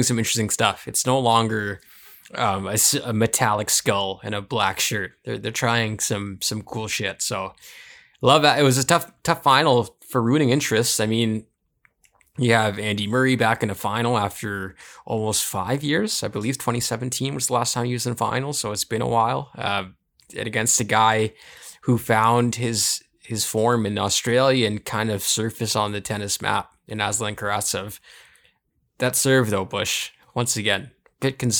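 No technical faults are audible.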